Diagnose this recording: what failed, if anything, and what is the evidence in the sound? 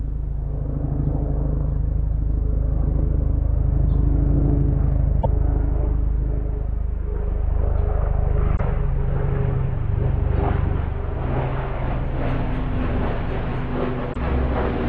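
The compressed stream carries damaged data at the codec stage: corrupted bytes leave the decoder misreading frames and hunting for the next valid header. The sound breaks into brief, roughly 70 ms blips at 5.19 to 5.26 s, 8.53 to 8.60 s and 14.10 to 14.16 s.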